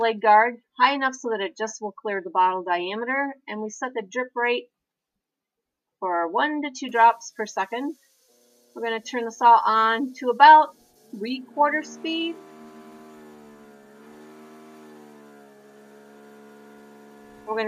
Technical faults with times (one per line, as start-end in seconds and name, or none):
none